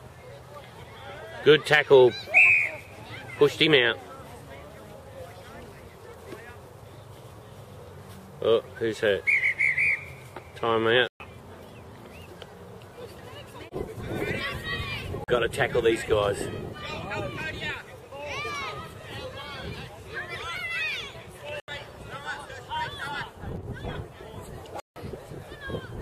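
At 11.08 s the sound just drops out for 120 ms, then again at 15.24 s for 40 ms, at 21.6 s for 80 ms, and at 24.8 s for 160 ms, the longest. Each is a block of digital silence: the output got zeros instead of audio, most likely because the buffer wasn't filled in time. The audio cuts out and back with no fade, so you hear short holes rather than ticks.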